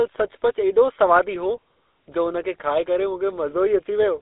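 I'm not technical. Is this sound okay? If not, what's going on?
No. The whole clip has passed through the GSM full-rate codec, the original mobile-phone system. It rebuilds the voice from a simple model fed with regular pulses. That gives the speech a clear buzzy, gravelly roughness. Nothing above 3.8 kHz gets through, so it sounds thin and muffled.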